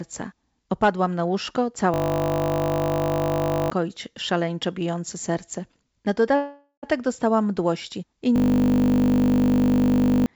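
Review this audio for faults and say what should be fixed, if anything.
From 1.94 to 3.70 s and again from 8.36 to 10.26 s, a system hang loop turns the speech into a steady 50 Hz buzz. A 20 ms slice repeats exactly, about two seconds of audio are lost each time, and the speech resumes further on. Unlike a freeze, nothing fades. Keep the audio thread running when the system stalls, for example by giving it real-time priority and removing blocking calls.

From 6.36 to 6.85 s, a call audio freeze holds the last sound as a decaying fill that ends in about 90 ms of silence. Speech then resumes exactly where it stopped, so about 0.47 s has been inserted and nothing is lost. That continuity separates it from the hang loops. The likely cause is delayed packets draining the jitter buffer, so add jitter-buffer headroom or improve network reliability.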